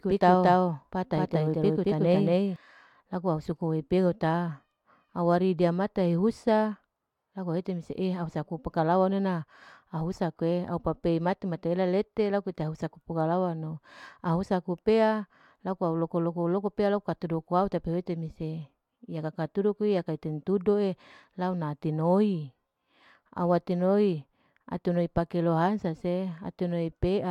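From the very start up to 2.56 s there's a doubled audio track: a second full-band copy of the speech trails about a fifth of a second behind, roughly as loud as the original, with no decay or room tone. It cuts off abruptly at 2.56 s, likely from a slower capture path recording the same signal twice.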